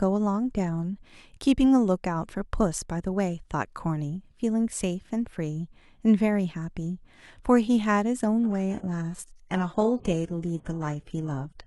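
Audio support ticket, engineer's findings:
Adaptive stream at a lower bitrate, 8.39 s to end of clip. Speech quality drops abruptly with no gap: top end turns synthetic and swirly, codec artefacts rise. Spectrogram shows a hard high-frequency ceiling cutting in at 8.39 s, upper band replaced by smeared, patchy texture. Waveform is continuous across the switch. Probable component: player rate adaptation after a bandwidth drop, consistent with a step from roughly 96 kbit/s AAC down to HE-AAC near 12 kbit/s.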